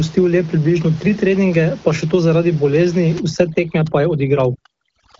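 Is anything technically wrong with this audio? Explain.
Yes. From about 3.2 s, right after "še to zaradi bolezni", to the end, there is overdone noise removal. The suppressor pulls frequency bands near its noise estimate far down. Quieter speech detail vanishes with the room noise. The background drops and breaks up into twinkling specks.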